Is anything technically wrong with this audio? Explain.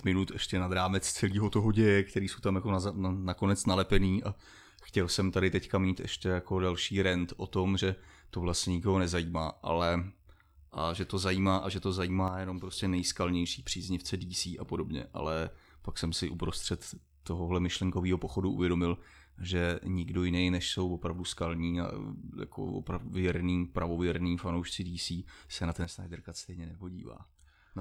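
Yes, the speech has two sudden gain jumps. The likely cause is a digital gain setting applied from one sample to the next with no ramp, so the whole signal, background noise included, steps in level at once. At 12.28 s, right after "zajímá a že to", the level drops by about 6 dB and snaps back at 12.73 s, before "nejskalnější příznivce". At 25.85 s, after "se na", it falls by about 8 dB and stays down to the end.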